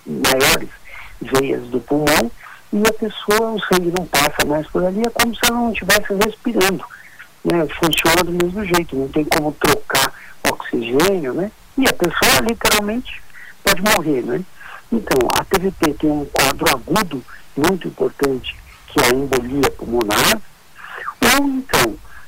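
Across the whole clip, integer overflow breaks out on the loudest moments. The signal runs about 7 dB hotter than the integer range can hold, and instead of being limited at the ceiling, each excess peak wraps around to the opposite extreme. A small share of samples, roughly a couple of percent, go over, and each produces a violent, snapping crack. Clipping only flattens peaks into a dull buzz. Here the waveform jumps across its full range, so the crack is far sharper and harsher.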